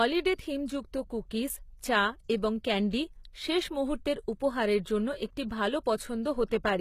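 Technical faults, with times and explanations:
Throughout, HE-AAC compression, likely, and plainly audible: the top end of the speech sounds bright but wrong, with s sounds coming out gritty and a bit lispy, almost metallic. That's the signature of spectral band replication, where only the lower band gets properly coded and the treble is rebuilt by copying lower bands upward under a rough envelope, so the harmonics up there don't line up with the real ones. The damage level points to a low bitrate, somewhere around 20 kbps.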